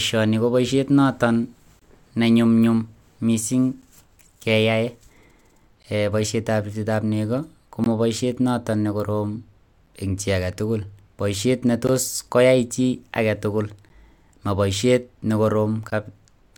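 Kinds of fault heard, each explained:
Gap between stream segments: at 1.79–1.82 s, then 3.82, 5.83, 7.84, 9.86, 11.87, 13.89 and 15.90 s, the speech drops into hard-edged silence lasting roughly 10 to 22 ms. The holes recur about every 2 s, which fits a stream delivered in 2-second segments whose timestamps don't quite meet. The player pads each join with silence, so nothing is lost, but the speech is briefly interrupted at each boundary.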